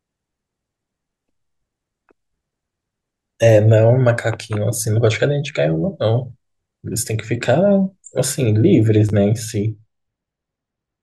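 At 6.93 s a brief click-like stutter comes from a repeated buffer. Fresh audio arrived late, so a 10.7 ms slice, which fits a 512-sample buffer, played once more with a hard join. From 8.88 s to the end the speech turns dull and muffled, sloping down about 8 dB at 10 kHz relative to 1 kHz. This is de-emphasis applied wrongly: a treble cut used where no pre-emphasis existed, or applied a second time. Inside that stretch, at 9.09 to 9.11 s, the same buffer repeats twice, giving a slightly longer buzzy stutter with essentially no audio lost.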